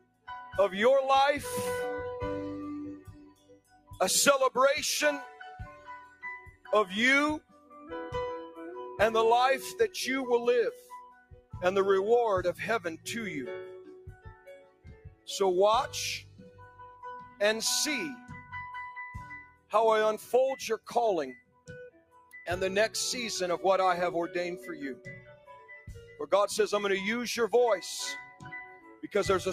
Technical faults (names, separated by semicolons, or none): noise suppressor applied to music or sounds; sound cut by the noise suppressor